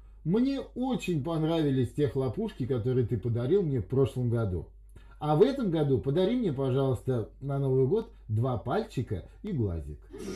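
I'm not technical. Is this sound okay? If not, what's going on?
No. Two tiny blocks of digital silence, at 8.02 s and 9.47 s, each under a millisecond, cut the sound abruptly and leave audible ticks.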